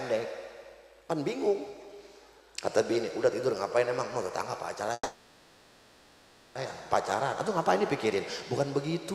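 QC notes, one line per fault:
4.93–6.57 s, call audio freeze: the last sound is held and stretched into a fading buzz for about 1.6 s, with only a brief silence, then the audio resumes where it stopped with nothing lost. Likely delayed packets emptied the jitter buffer, leaving everything afterwards 1.62 s late.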